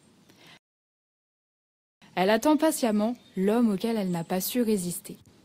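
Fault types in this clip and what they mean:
rebuffering stall: the player exhausted its downloaded audio and halted until more data arrived. The sound drops to silence from about 0.57 s to 2.02 s, then picks up exactly where it stopped, so nothing is lost but roughly 1.4 s is added.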